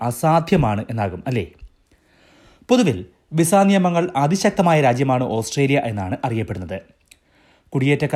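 No technical faults can be heard anywhere in the speech recording.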